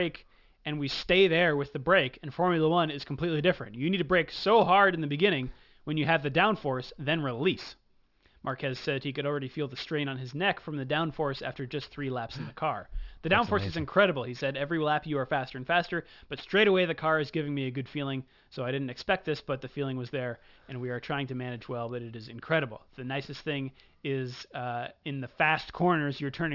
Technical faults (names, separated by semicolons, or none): aliasing